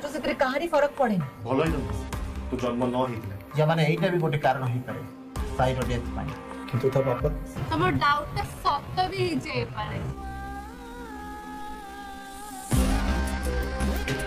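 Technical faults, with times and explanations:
7.63–13.91 s, time-stretched section: the pace abruptly drops to about 0.64 of normal speed while pitch stays put, so the audio drags. Software likely stretched this span by repeating short pieces. A plain slowdown would lower the pitch too.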